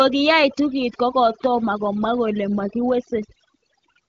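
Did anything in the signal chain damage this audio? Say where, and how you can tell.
Yes. Overdone noise removal runs through the whole speech clip, from the start to the end at about 4 s, at the call-processing stage. A suppressor set far too aggressively is driving individual frequency bands down or out whenever their level sits near its noise estimate. The background drops and breaks up into twinkling specks, and softer parts of the speech are stripped along with it. The wideband codec's band edge near 7 kHz sounds as expected, with coding that fits a rate around 12.65 kbit/s.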